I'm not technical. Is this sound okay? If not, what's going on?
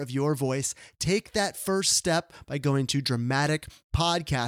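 Yes, no technical faults are audible anywhere in this speech recording.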